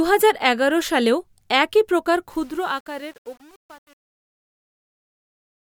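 Truncation distortion on a fade affects this speech from 2.3 s to the end, worst from 2.5 s, where the fade-out, which fits an undithered 8-bit stage, collapses into gritty square steps.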